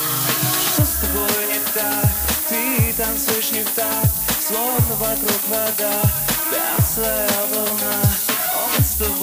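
Throughout the clip, low bit depth with noise shaping is audible: the sound appears quantised to roughly 4 bits, with the rounding error fed back and pushed toward high frequencies. The result is a steady, thin hiss rising sharply at the top, about 5 dB louder than the signal.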